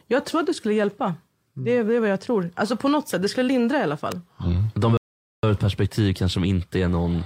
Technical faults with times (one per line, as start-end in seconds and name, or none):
4.12 electrical switching spike
4.97-5.43 rebuffering stall